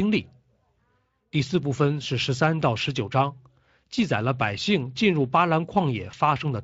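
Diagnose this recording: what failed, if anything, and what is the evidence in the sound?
Network stage, VoIP packet loss concealed by the speech codec: a gap fitting one lost 20 ms frame was extrapolated, leaving a brief fading smear from 6.11 to 6.15 s.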